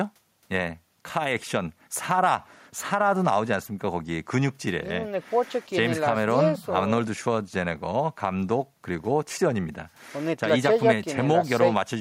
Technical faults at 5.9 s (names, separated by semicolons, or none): none